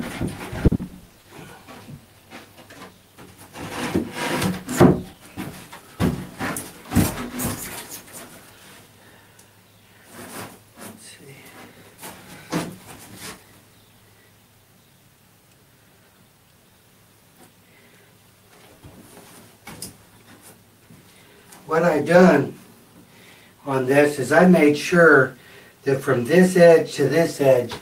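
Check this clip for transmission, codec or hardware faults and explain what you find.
Two transmission faults are audible.

Repeated packet loss (robotic sound) runs from 0.67 to 1.28 s. Packets went missing or late in quick succession, and each hole was covered by stretching the preceding sound. Six gaps, the longest 60 ms, leave 40% of the stretch concealed, so it sounds choppy with pieces missing.

Jitter buffer speed-up occurs from 5.13 to 5.79 s. The receiver's buffer had built up surplus audio, so it trimmed short pitch-period slices repeatedly, around 50 ms in total. Playback runs at 106% speed with unchanged pitch, sounding briefly hurried.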